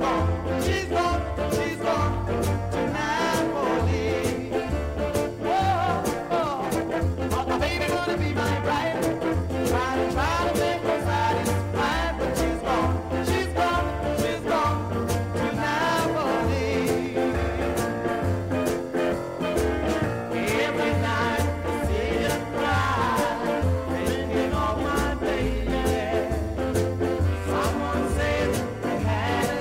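A time-stretched section runs from 6.28 to 9.5 s, where the pace abruptly jumps to about 1.56 times normal speed while the pitch stays where it was. The audio in that span sounds rushed. This is likely the work of software squeezing the passage to fit a shorter length, discarding small pieces of the waveform so that the pitch does not rise.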